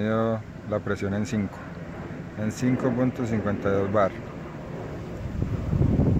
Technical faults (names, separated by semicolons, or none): none